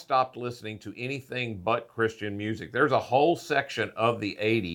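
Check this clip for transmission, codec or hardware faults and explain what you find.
No transmission, codec or hardware faults found here.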